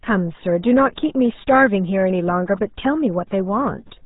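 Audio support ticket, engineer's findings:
RealAudio 14.4 codec throughout: low-rate speech coding, consistent with about 8 kbit/s. Nothing above 3.8 kHz. Heavy coding damage leaves speech muffled and gargly.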